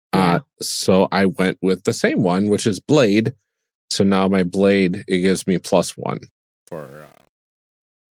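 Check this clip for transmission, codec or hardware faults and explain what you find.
One fault stands out: truncation distortion on the closing fade. It begins at 6.29 s, right after "gives me plus one", and lasts to the end at 8.11 s. The trouble is in how it was rendered. The gain stage kept too few bits and added no dither, which points to roughly 8-bit resolution. As the level drops, the waveform collapses into coarse steps. From 6.47 s onward the tail turns gritty.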